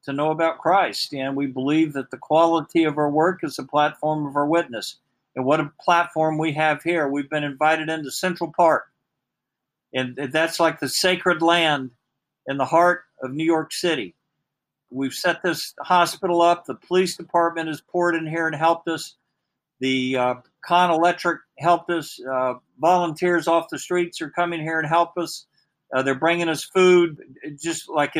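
No technical faults can be heard anywhere in the audio. There is nothing in it to mark with a time.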